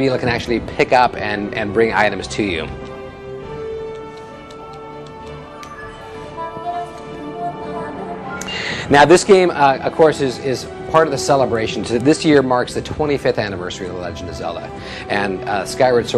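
No technical faults can be heard anywhere in the clip.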